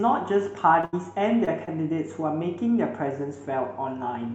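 Right at 0.81 to 0.85 s there's a short concealed packet loss: about 20 ms went missing, the decoder patched it by carrying the sound on, and you get a quick smear. That runs straight into a burst of packet loss from 0.85 to 0.95 s, where 80 ms never arrived, so the concealment holds a fading buzz or hiss before the audio picks up further along. Two more short concealed losses hit at 1.45 to 1.49 s and 1.65 to 1.69 s, each about 23 ms patched over, heard as brief wobbles. All of it comes through a call path whose top end stops around 8 kHz, which fits wideband Opus.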